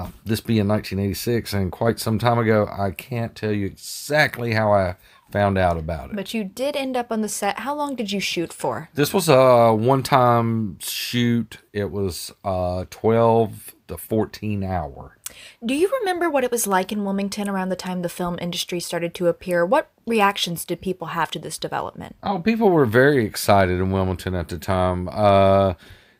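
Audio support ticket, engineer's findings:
No audible faults found; speech path needs no action.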